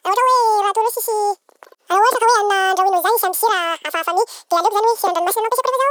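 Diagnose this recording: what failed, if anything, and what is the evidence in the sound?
A wrong sample rate at playback. Throughout, the speech runs at twice normal speed and sits 12 semitones, a full octave, too high. Speed and pitch shift together, so the samples are clocked out unconverted. The doubling fits 24 kHz audio played at 48 kHz.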